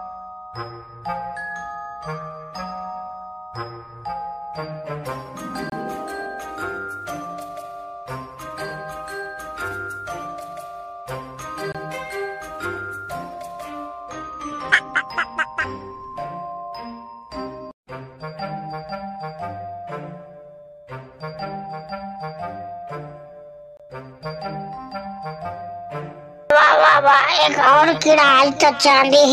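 Gap between chunks at 5.70, 11.72, 17.75 and 23.77 s: the audio arrives in 6-second pieces with 25 ms of silence between them, heard as short dropouts.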